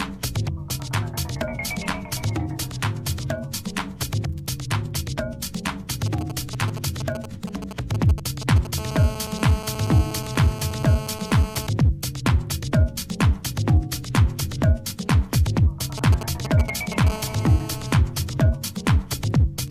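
A galloping dit-dit-dit of short 217 Hz buzzes, roughly 10 dB below the sound, appears from 6.06 to 8.67 s and from 15.98 to 17.09 s. These are GSM signalling bursts: a nearby 2G phone's radio pulses are rectified by the audio circuit. Each burst run turns into a steady, hard, raspy 217 Hz buzz with many harmonics, from 8.78 to 11.67 s at about 12 dB below the signal and from 17.10 to 17.93 s at about 14 dB below. This is GSM phone buzz from a phone's call transmission, which goes out in bursts 217 times a second.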